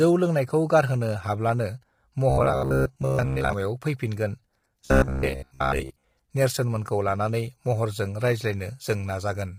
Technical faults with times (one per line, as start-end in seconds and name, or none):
0.00-9.59 low-delay AAC compression
2.30-3.53 robotic sound from repeated short buffers
4.85-6.04 robotic sound from repeated short buffers